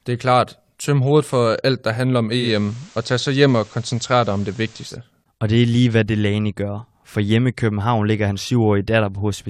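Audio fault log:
2.37–4.98 s, digital radio blending to analogue: right after "alt der handler om" the receiver loses the digital stream and cross-fades over about 148 ms to the station's FM broadcast, then fades back at 4.98 s. While it's on FM, a faint hiss sits roughly 30 dB under the speech, and the level shifts by about 1 dB.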